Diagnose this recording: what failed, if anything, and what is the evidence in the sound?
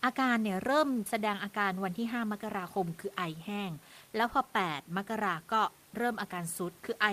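Nothing failed; the room noise is faint, about 30 dB down.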